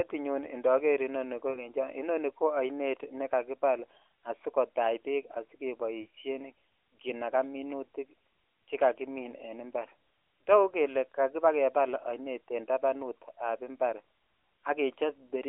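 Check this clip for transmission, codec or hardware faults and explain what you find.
The clip has one kind of transmission fault: lost AMR speech frames, at three points. The narrowband speech band, roughly 200 Hz to 3.5 kHz, shows light codec damage.

Dropouts occur at 1.50 to 1.71 s, before "I oni ko oinet", at 6.02 to 6.06 s, and at 12.00 to 12.03 s, before "oinet en tabanut ab". The first two gaps fit about 40 ms of missing audio each, and the third about 20 ms. The decoder repeats the last good pitch and vocal tract settings with falling gain. The single lost frame at 12.00 s sounds like a brief dip or warble, while the two-frame gaps sound drawn out.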